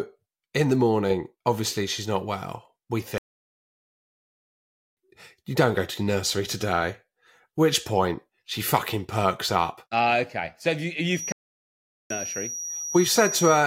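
Speech with two playback stalls: the output goes fully silent from 3.18 to 4.97 s (1.79 s) and from 11.32 to 12.10 s (0.78 s), likely because the player ran short of data or its thread was blocked. From 11.08 s to the end a thin feedback whistle at 5.8 kHz sits around 10 dB below the speech, swelling and fading slowly in level without building into a howl, which sets it apart from steady electrical tonal interference. It likely comes from a loudspeaker-to-microphone loop held just short of runaway feedback.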